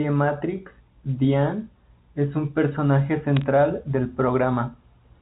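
Right after "es un personaje", from about 3.37 to 3.42 s, a short burst of sharp ticks and crackle cuts across the speech. These are bit errors on a digital phone line: at a rate of roughly one bit in five hundred, flipped bits corrupt individual samples of the 64 kbps G.711 mu-law stream. A hit on a high-order bit, or on the sign of a loud sample, throws that sample far off its true value, and the resulting jumps are what produce the clicks.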